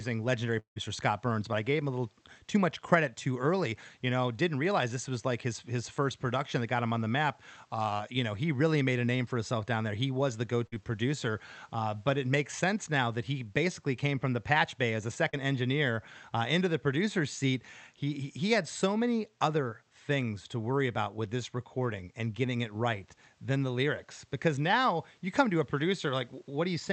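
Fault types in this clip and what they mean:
long network dropout: Audio likely stopped arriving near 0.59 s; the last sound is stretched about 165 ms and fades, followed by about 110 ms of silence, losing about 160 ms.
short concealed packet loss: Brief gaps of 20 and 40 ms never reached the decoder, at 7.97 s and 15.30 s, and were filled by continuing the prior sound, giving short smears.
burst of packet loss: Packets were lost or came too late around 10.67 to 10.82 s; the receiver extended the last sound about 51 ms as it faded, and about 60 ms of audio is missing.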